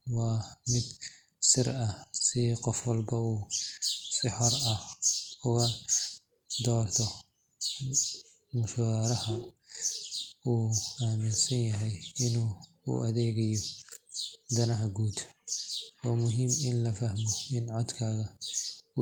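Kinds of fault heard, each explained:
Nothing stood out on listening to the speech.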